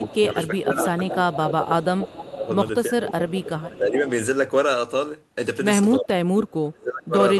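From 0.0 to 3.09 s the speech is pulled down in patches totalling around two seconds, at worst by about 15 dB. This is speech suppressed in double talk, likely an echo canceller that could not tell the near talker from loudspeaker echo and turned everything down. On a waveform the envelope shows sudden sags. On a spectrogram the harmonics fade in those stretches.

Overlapping that, from 0.09 to 1.37 s, a delayed copy of the speech trails it by 342 ms at about 10 dB below. This is echo leak, likely residual loudspeaker pickup that got past the canceller and was sent back. It returns as a short scrap at 2.33–2.37 s at about 20 dB down, then from 3.08 to 3.98 s at about 15 dB down. A spectrogram shows faint duplicate harmonic patterns offset 342 ms to the right, often broken up.

Within that last echo, 3.69–3.96 s dips again by about 10 dB. From 6.0 s to the end the suppression is deepest, about 25 dB, and the waveform collapses to a thin trace.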